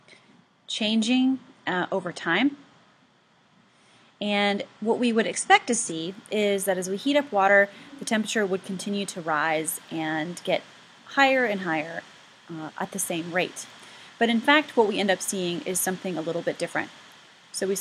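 From the start to 6.0 s the sound is thin and smeared, with nothing above 9.8 kHz and strong codec artefacts: the adaptive stream starting at a low bitrate. The player picked a small version to begin quickly, consistent with something like 32 kbit/s AAC. At 6.0 s the treble returns abruptly without any gap, which points to a step up near 96 kbit/s. The seamless switch separates it from a rebuffering stall, and the improvement separates it from a file encoded poorly throughout.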